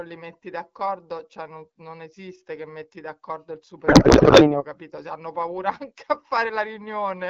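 Codec payload misread from 3.87 to 4.64 s: octet-aligned AMR frames are unpacked as bandwidth-efficient, misplacing every field, so speech collapses into garbled, warbling noise.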